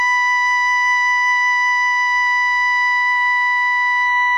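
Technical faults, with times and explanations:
No technical faults are audible.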